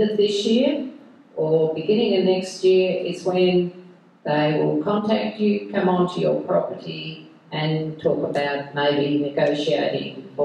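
At 4.97 s, compressed frames are skipped. The decoder drops about two frames, each 23.2 ms long. Roughly 50 ms of audio is lost. The sound jumps forward.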